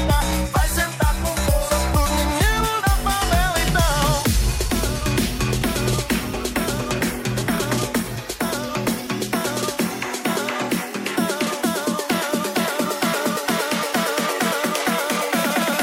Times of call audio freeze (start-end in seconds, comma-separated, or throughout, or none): none